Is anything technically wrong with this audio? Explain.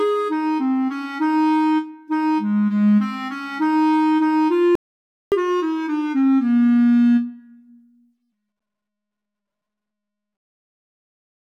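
Yes, there are two related faults.

From 4.75 to 5.32 s there is a playback stall. The player most likely ran short of data or had its thread held up, so output went silent for about 0.57 s, cutting the sound off mid-flow before it resumed.

From 5.32 to 8.32 s comes catch-up at higher speed. To recover the lost time, the player resampled its backlog at 1.15 times normal rate, so for those three seconds the audio runs faster and sits roughly two semitones sharp before settling back.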